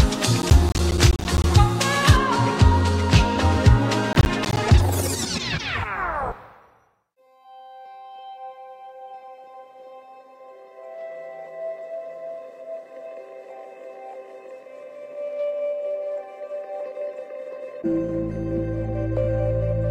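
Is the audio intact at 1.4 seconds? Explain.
No. At 1.4 seconds the sound is near the end of a burst of processor overload crackle that runs from 0.42 to 1.44 s. The processor is missing its deadlines for filling short audio buffers, around 10 ms each. Some twenty of them come up empty and are played as silence with hard edges, so the sound tears into a gritty crackle. Unlike a single dropout, it is a dense run of tiny gaps that stops once the load eases.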